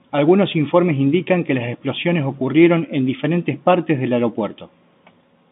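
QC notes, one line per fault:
Nothing here needs flagging; it's ordinary G.711 telephone-line audio, with the narrow band of roughly 150 Hz to 3.7 kHz you'd expect from a standard phone call.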